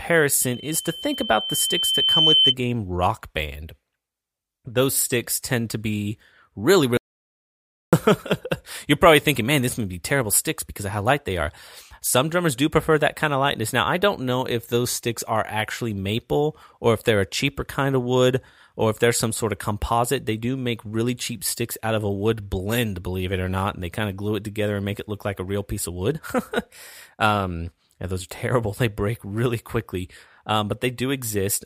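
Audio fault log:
0.41–2.55 s, loudspeaker feedback squeal: the microphone is picking up a loudspeaker that carries its own output, and at around 3.1 kHz the gain around that loop exceeds one, so that frequency reinforces itself on every pass. The result is a thin, piercing tone that swells over roughly two seconds into a squeal about 5 dB louder than the speech. It stops at 2.55 s.
6.97–7.93 s, audio dropout to silence: the input signal was cut off, likely by a momentary disconnection or a failed link, while the recorder kept writing silence. Right after "tend to be really" the speech stops abruptly, leaving about 0.96 s of complete silence with no room tone or background underneath. The speech then resumes mid-flow, and whatever was said in that stretch is lost entirely.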